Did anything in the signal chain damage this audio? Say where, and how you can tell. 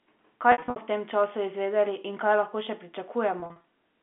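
Yes: packet loss with pitch repetition on the network, at 0.52–0.76 s and 3.40–3.64 s. The receiver patched gaps of up to 60 ms by looping the last pitch period, causing a held buzz. A spectrogram shows frozen harmonic stripes, and a waveform shows identical repeating cycles that fade.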